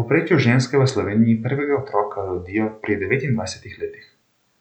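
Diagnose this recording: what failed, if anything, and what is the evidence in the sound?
A Bluetooth SBC bit pool drop (codec stage) occurs from 0.75 to 3.07 s: the speech turns dull and gritty, consistent with the bit pool falling from 31 to around 13, starving the upper sub-bands.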